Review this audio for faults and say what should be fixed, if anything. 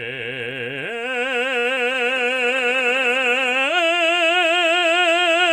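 A short stall from a late packet at 1.59 to 1.66 s: the jitter buffer ran dry, so the music is held about 50 ms too long, then resumes with nothing lost and the playout 50 ms later.

Short concealed packet loss at 1.74 to 1.78 s and 1.92 to 1.96 s: about 20 ms of audio never reached the decoder each time, and the gap was filled by extending the preceding sound, leaving a brief smear in the music.

A call bitrate drop from 2.07 to 3.68 s: the encoder was pushed from 48 to 17 kbps, staying at the lowest rate for about 1.5 s, so the music is coded much more coarsely and loses detail until the rate recovers.

To prevent this, give the jitter buffer more headroom and add forward error correction against loss, and have the bandwidth estimator react less sharply to short network dips.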